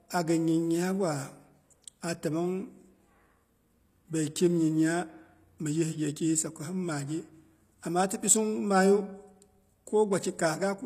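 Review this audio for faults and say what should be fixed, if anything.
Throughout the speech, the audio was likely encoded with HE-AAC compression at a low bitrate, consistent with about 24 kbps. The codec rebuilds the treble by copying lower bands upward, so s sounds come out gritty and lispy, with nothing above 14.9 kHz. To prevent it, encode at a higher bitrate or use plain AAC or a lossless format so the treble is coded directly.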